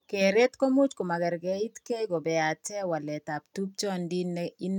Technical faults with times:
none

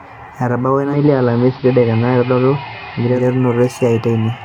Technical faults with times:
0.81-3.30 digital radio blending to analogue

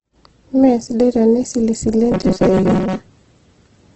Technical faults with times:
0.00-3.95 Opus compression
2.12-3.06 robotic sound from repeated short buffers

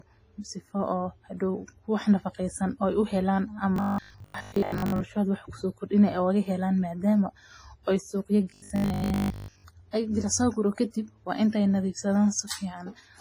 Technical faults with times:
0.00-13.20 WMA compression
3.76-5.00 robotic sound from repeated short buffers
8.50-9.66 robotic sound from repeated short buffers

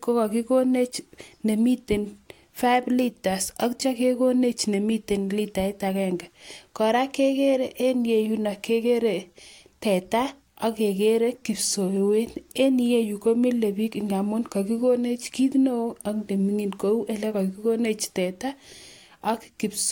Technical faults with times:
none

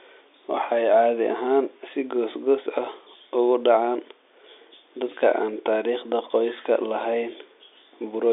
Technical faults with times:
none

